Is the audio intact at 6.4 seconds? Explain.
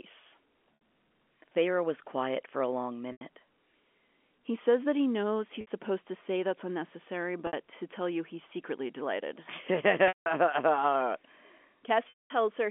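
Yes, the audio is intact at 6.4 seconds: the speech there carries only the narrow telephone band of the G.711 line, with no fault at that moment.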